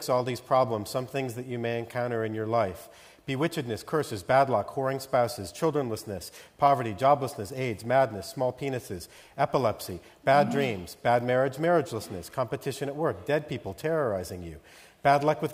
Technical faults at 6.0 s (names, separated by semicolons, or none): none